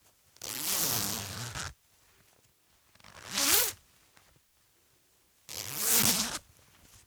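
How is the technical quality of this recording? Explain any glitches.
No audible glitches or faults.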